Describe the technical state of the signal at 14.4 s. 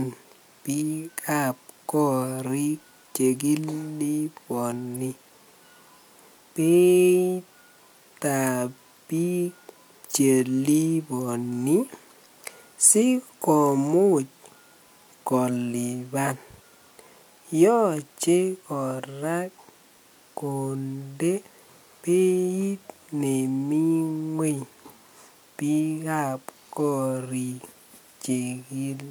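The signal is intact at 14.4 s, with no technical fault audible at that moment.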